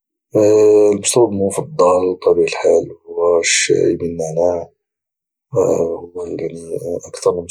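No technical faults are audible anywhere in the speech recording.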